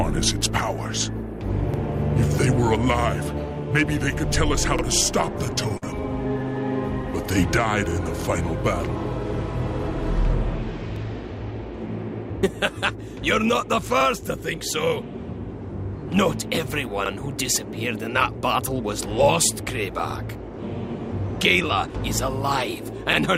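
Overlapping chunks at 1.74 and 4.79 s: the audio was handled in 3-second blocks, each starting about 48 ms early, so that sliver replays as a brief stutter-click.

Repeated stalls (stutter) from 5.45 to 5.84 s: packets arrived late four times, the jitter buffer emptied, and the receiver stretched the last sound across about 65 ms. The longest wait was 41 ms. Nothing is lost, but the passage drags and judders.

The overlapping chunks return at 10.96, 14.01, 17.06 and 20.11 s, with the same roughly 48 ms doubled join clicking at each block boundary.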